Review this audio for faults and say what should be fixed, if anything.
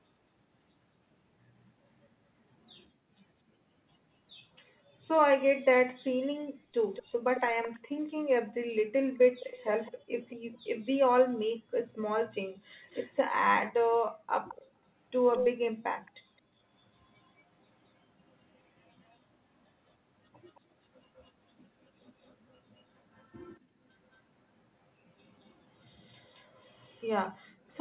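Echo leak: a delayed copy of the speech trails it by 219 ms at 6.94–8.09, 9.40–10.36, 12.90–13.16, 14.48–16.11, 19.11–19.29, 20.48–24.17 and 25.99–27.81 s. It is loudest from 14.48 to 16.11 s, only a little below the speech. Elsewhere it is much quieter. The likely cause is a loudspeaker at the other end whose echo canceller passed its playback back into the call. A headset or better echo cancellation at that end would prevent it.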